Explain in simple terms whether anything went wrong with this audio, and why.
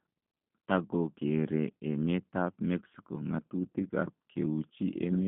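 G.729 codec damage runs through the whole clip. This phone-call compressor rebuilds speech from a rough model of the mouth and a few pulses. It keeps only 150 Hz to 3.5 kHz, so the speech sounds thin, slightly rough and plainly synthetic.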